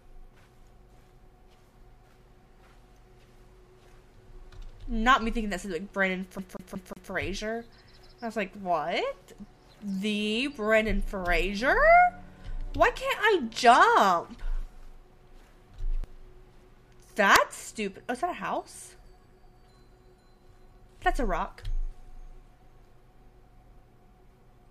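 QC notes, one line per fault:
6.39–7.11 s, CD stuck on one turn: a 182 ms slice repeats four times with brief mutes at each jump, an even mechanical stutter unlike irregular dropout gaps.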